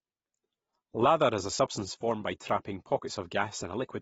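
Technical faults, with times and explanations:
Throughout, AAC compression: the dull, smeared quality points to a low-bitrate AAC-LC encode, likely around 24 kbps. At that rate the encoder cannot spend enough bits on every frequency line, so it cuts off the top of the spectrum. Nothing is left above 7.6 kHz. It also quantises the remaining bands coarsely. The damage is plainly audible: sibilants lose their crispness and take on a fizzy, warbling texture, while the overall tone sounds muffled and smeared.
0.48 to 3.50 s, clock drift buffer slips: two devices on separate clocks, likely about 150 parts per million apart, let the buffer between them creep out of step until it has to drop or repeat a handful of samples to catch up. Each correction breaks the waveform's continuity, so a click is heard about once every 1.0 s across this span, roughly four in all, landing at the same steady interval while the speech continues.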